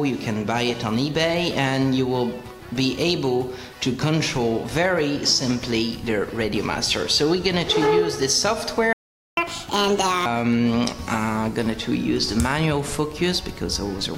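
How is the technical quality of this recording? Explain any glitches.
The recording has two linked glitches in quick succession.

From 8.93 to 9.37 s there is a playback stall: the sound stops dead for 442 ms and then resumes, likely because the player ran short of data or its thread was blocked. On a waveform this shows as a flat gap, and on a spectrogram as a blank vertical band.

From 9.37 to 10.26 s comes catch-up at higher speed: the player resamples its backlog at 1.5 times normal speed, so the audio runs fast and its pitch rises by about seven semitones. This recovers the 442 ms lost, and then normal speed returns. A spectrogram shows harmonics shifted upward and compressed in time.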